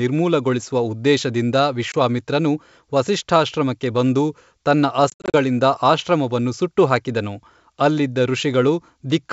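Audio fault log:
1.92–1.95 s, packet loss on an ADPCM call: a 20 ms hard-edged hole, about one packet's worth. The gap drops to silence, and the G.722 decoder's predictor and step size lose sync, so the sound comes back slightly distorted before settling.
5.10–5.35 s, packet loss on an ADPCM call: 160 ms dropped in bursts across 240 ms, longest run 60 ms. It's a choppy stutter, each restart briefly slightly distorted.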